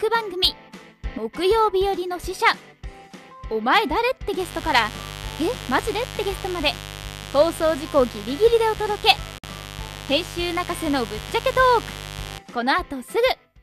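Right at the start, from about 1.05 to 1.18 s, there's a sudden gain jump: the level steps up by about 6 dB in one go rather than ramping, and the background noise lifts right along with the sound. That it happens instantly, with no fade, points to a gain setting or bit shift likely applied mid-stream without any smoothing.

From about 4.39 s through to 12.39 s, a mains buzz sits under everything. It's the 50 Hz kind with a raspy edge, because the hum carries a stack of harmonics up into the kilohertz range, the sort of thing you get when a dimmer, a rectifier or a missing shield lets sharp switching spikes in twice per cycle. It sits roughly 15 dB below the sound itself, and it stays steady for the full eight seconds.

Inside that buzzy stretch, around 9.38 to 9.44 s, there's a digital broadcast dropout. The receiver mutes with a very quick fade of about 3 ms, leaving a hole of about 48 ms before audio returns. 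That duration fits a couple of lost or corrupted frames of roughly 24 ms each. Whatever was sent during the gap is simply gone, so it's heard as a tiny cut-out, not a skip or a glitchy repeat.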